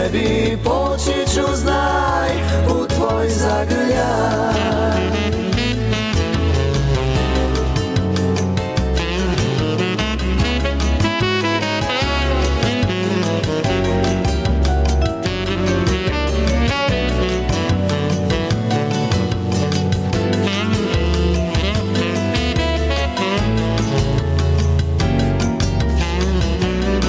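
Gain pumping throughout: the gain swings roughly 10 dB, likely from excessive input gain checked by a fast limiter pulling it down on each loud sound.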